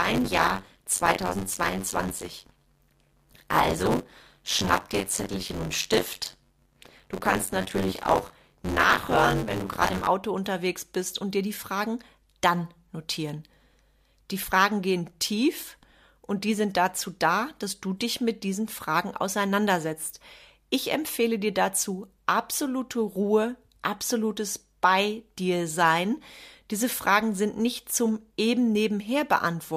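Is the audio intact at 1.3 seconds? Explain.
No. At 1.3 seconds the speech carries a steady robotic buzz at about 93.8 Hz, a rattle that is present only while there is speech. This is buffer tearing, running from 0.0 to 10.07 s. The writer and the hardware reader of the ring buffer have drifted into each other, so roughly a third of every period replays audio from about 30 ms earlier, with hard joins at both edges. That repeat rate fits a 512-sample buffer.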